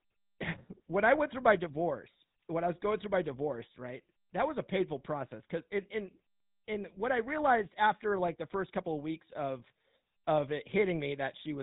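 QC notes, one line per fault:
Throughout, GSM full-rate codec. The speech has a plainly audible buzzy, gravelly roughness. The codec models the vocal tract and drives it with sparse, evenly spaced pulses, so fine excitation detail is lost. Nothing passes above 3.8 kHz. This fits a 13 kbps stream.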